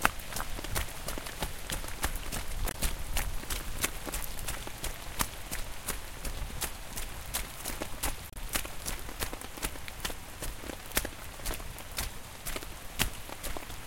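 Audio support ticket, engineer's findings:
Damaged data in a compressed stream, 2.68–2.75 s and 8.30–8.36 s, each about 66 ms. Probable component: compressed file or stream upstream of the decoder. Mechanism: corrupted bytes make the decoder misread or reject frames, lose sync and hunt for the next frame header. Audible as a brief disruption at both points. Spectrogram: a short vertical band at each time, either a broadband smear or a gap. Waveform: discontinuity at each edge of the span.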